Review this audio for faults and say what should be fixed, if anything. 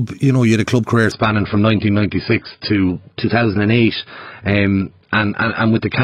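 Adaptive stream at a lower bitrate, from 1.12 s to the end: the audio suddenly loses its treble, with nothing above about 5.1 kHz, and codec artefacts rise without any gap in playback. This fits an adaptive player switching from roughly 96 kbit/s AAC to a 16 kbit/s version when throughput fell, and the clip never returns to the higher tier. To prevent it, give the player more buffering headroom or set a higher minimum bitrate so it doesn't drop to such a low tier.

Drift correction step, from 2.89 s to 3.95 s: speed and pitch rise together by 5.78%, about 97 cents, close to a semitone, then return at 3.95 s. The likely cause is clock-matching software changing the playback rate in one large step to correct its buffer level, rather than making the small adjustments such correction normally uses. To prevent it, limit drift correction to small, gradual rate changes or use resampling that stays far below 1%.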